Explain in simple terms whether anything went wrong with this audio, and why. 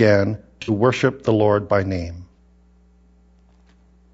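Two things went wrong. The whole speech clip sounds rough and grainy, with a hiss-like fuzz between the tones of the voice and a thin, slightly artificial top end. That is most likely low-delay AAC compression, the kind used in video calls. It cuts the sound into very short slices to keep delay down, which blurs the voice's pitch detail. Unlike ordinary background noise, this graininess follows the voice and rises and falls with it.

There are also two brief AAC frame losses with concealment. The first runs from about 0.62 to 0.70 s, just before "worship the". The second runs from about 2.33 to 2.38 s, just after "by name". In each spot a short piece of data never arrived, and the decoder patched the gap from the sound just before it. The result is a smeared, phasey blur rather than silence. That sets it apart from a dropout or a click, which would leave a clean gap or a sharp tick.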